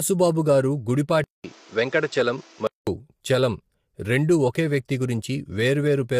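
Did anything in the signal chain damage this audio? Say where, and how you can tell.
Yes. Across the whole clip the speech sounds rough and grainy, with noise filling the gaps between harmonics and a thin, synthetic-sounding top band. This points to the codec stage, likely low-delay AAC compression (AAC-ELD) at about 32 kbps. Its short frames resolve pitch harmonics poorly, so at this rate the damage is plainly audible. Because it is steady for the entire clip, it is not a device change.

From 1.24 s to 2.87 s, the input switched to a poorer device, likely at the driver or device level. The switch begins with a gap of about 200 ms. Then nothing above 7.6 kHz comes through, so the sound turns duller, and a new noise floor appears about 30 dB below the speech. The full band returns just before "చలం రెండూ ఒకే వ్యక్తి". Loudness stays roughly the same, so this is a change of microphone path, not a gain or level fault.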